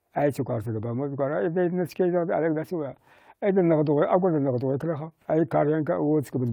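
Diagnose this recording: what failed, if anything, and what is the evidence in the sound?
No audible fault in this recording.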